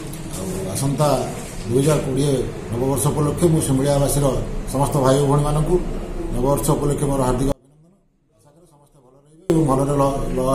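The audio has an audio dropout to a faint residue from 7.52 s to 9.50 s, almost 2 seconds. The wanted signal cuts out abruptly, but the gap is not silent: a faint trace of the sound remains, far below normal level, and then the full signal returns just as suddenly. The likely cause is a break in the signal feed while the downstream path stayed live. A pause or a fade would not keep that weak leak or switch so sharply.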